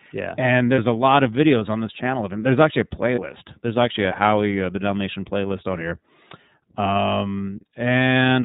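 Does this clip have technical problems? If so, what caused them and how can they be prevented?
Yes. The iLBC codec runs throughout: nothing passes above 4 kHz, and the audio has a plainly audible rough, synthetic edge from frame-by-frame excitation coding, consistent with iLBC's 30 ms, 13.33 kbps mode. Using a wideband codec such as Opus at an adequate bitrate would prevent this.

Lost iLBC frames occur at 0.75–0.79 s, just before "a lot of videos", and at 3.14–3.19 s. Each is a single 30 ms gap that the decoder fills by repeating the last pitch cycle mixed with noise, so it sounds like a brief buzzy held vowel. Clean audio returns immediately because each iLBC frame decodes independently. Packet redundancy or forward error correction, together with an adequately sized jitter buffer, would prevent these gaps.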